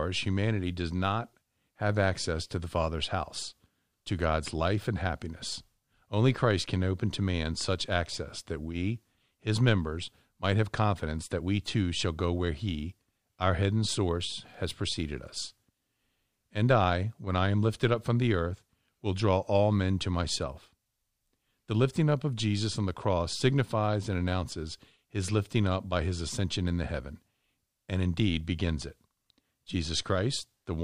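No dropouts, clipping, distortion, noise bursts or timing breaks turn up anywhere in the recording, so there is nothing to report.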